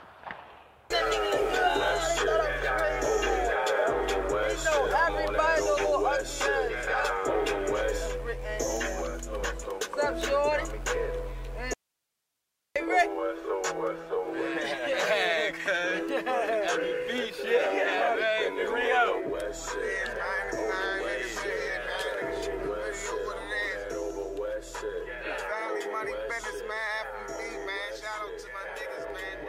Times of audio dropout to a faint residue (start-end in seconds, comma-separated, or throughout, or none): 11.73-12.76